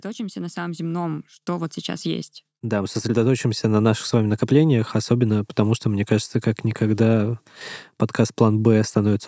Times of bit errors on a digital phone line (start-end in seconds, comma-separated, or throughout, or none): none